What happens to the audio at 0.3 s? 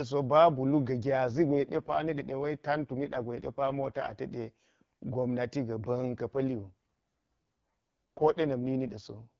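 Nothing goes wrong at 0.3 s: the speech there comes through intact, carried by the AMR wideband (HD Voice) codec at 12.65 kbit/s, a rate at which it stays clear.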